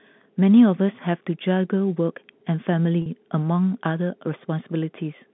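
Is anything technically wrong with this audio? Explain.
Yes. From 3.02 to 3.06 s the speech briefly hangs on a slightly held, buzzy tone instead of moving on. This is packet loss with pitch repetition. About 40 ms of audio went missing, which fits two 20 ms packets. The receiver filled the hole by looping the last pitch period it had and then resumed normal speech. The gap is short, so the repeated cycle never fades fully to silence and comes across as a brief, mechanical sustain within the G.711 telephone-band audio.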